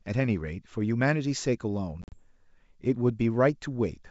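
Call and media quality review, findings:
Packet loss on ADPCM call, 2.02–2.19 s: several hard-edged silent holes, about 80 ms lost within 100 ms, longest 40 ms. The G.722 decoder's predictor and step size drift from the sender's, so audio resumes slightly distorted, settling within tens of milliseconds.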